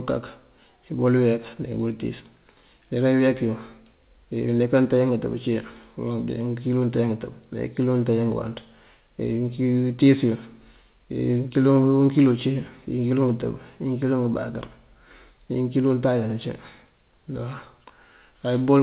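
No faults are present in the speech; the WebRTC call path leaves its expected narrowband sound with nothing above 4 kHz, which fits G.711 mu-law at 64 kbps.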